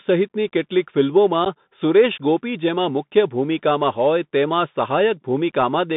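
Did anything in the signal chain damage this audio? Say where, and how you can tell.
Yes. A Bluetooth CVSD headset codec runs through the whole speech clip. The spectrogram shows energy confined to about 150 Hz to 3.7 kHz, with a granular hiss floor. The slope-tracking one-bit coder can't follow loud high content, which roughens sibilants and fits a 64 kbps CVSD link.

Unconcealed Bluetooth headset packet loss, a link-stage fault, appears from 1.45 to 1.47 s. About 11 ms of audio, a few packets' worth, was dropped and replaced with silence or an idle pattern. The waveform shows a hard-edged gap, and the level comes back quieter for a moment.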